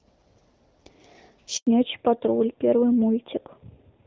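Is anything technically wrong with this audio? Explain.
Yes. A handover gap runs from 1.57 to 1.67 s. As the call switched networks, no speech frames arrived for 100 ms, so the sound fades out within a few tens of milliseconds and stays silent until the new link picks up, losing whatever fell in that window.

A fallback to narrowband follows at 1.67 s and lasts to the end. The call leaves the wideband HD Voice path, which sounds light and clear before the gap and fits AMR-WB at 12.65 kbit/s. It drops to an older narrowband codec, consistent with AMR-NB at 7.4 kbit/s. Nothing above 4 kHz survives, so the sound turns duller and rougher.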